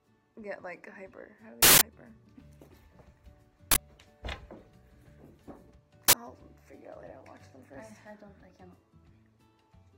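Uninitialised buffer bursts at 1.63 s (about 186 ms, fitting an 8192-sample block), then 3.72 s and 6.08 s (about 46 ms each, fitting 2048-sample blocks): blocks played before audio was written, so stale memory came out as harsh, loud digital noise.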